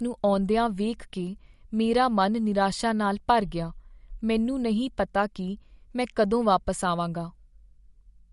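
From start to finish the speech carries plainly audible MP3 compression, which is likely the cause of its watery, swirly texture. Nothing sits above 11.2 kHz, so s sounds lose their sparkle and chirp metallically, and consonant attacks smear. The damage fits a low bitrate near 48 kbps. A spectrogram would show a hard, flat ceiling at 11.2 kHz and speckled, flickering patches below it where weak frequency lines drop in and out between frames.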